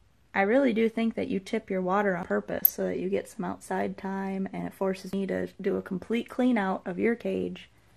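MP2 compression runs throughout: the sound is dull, with a gurgling, granular edge. This likely comes from MPEG Layer II coding at a rate around 80 kbps, which leaves too few bits, so upper sub-bands drop out and the rest are coarsely quantised.

Audio missing between chunks at 2.23 s: an abrupt skip, with about a tenth of a second of sound gone and the two sides butted together without any gap, likely as a recorder or processor working in 3-second chunks drops material at the changeover.

DAB burbling from 2.55 to 2.74 s: short blips of noise as bit errors, at a rate of a fraction of a percent, slip past error correction and put wrong samples into individual sub-bands.

Audio missing between chunks again at 5.13 s: the same kind of skip at the next chunk boundary, with about a tenth of a second lost and the edges joined directly.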